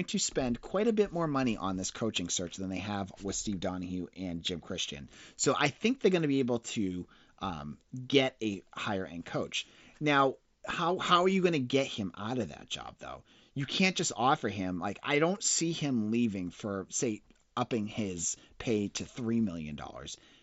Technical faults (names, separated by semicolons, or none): concealed Bluetooth headset packet loss